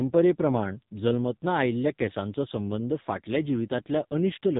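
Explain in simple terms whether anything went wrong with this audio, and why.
The speech sounds muffled, buzzy and robotic throughout, with nothing above 3.8 kHz: heavy AMR narrowband mobile codec damage, which squeezes the voice into very few bits.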